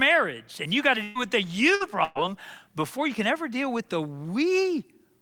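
It's a speech clip with three bursts of packet loss: after "and you got to" at 1.03 to 1.18 s, after "with the" at 1.75 to 1.83 s, and before "before you can ever" at 2.04 to 2.30 s. Each time the decoder stretches the last sound and fades it down, then jumps ahead with roughly 120, 60 and 120 ms gone.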